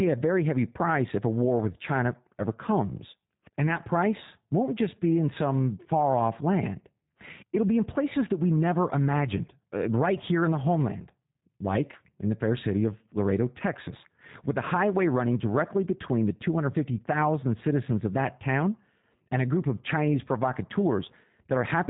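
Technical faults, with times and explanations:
throughout, G.729 codec: plainly audible rough, synthetic edge and nothing above 4 kHz, since speech is rebuilt from a filter and a few pulses per frame, which fits 8 kbit/s.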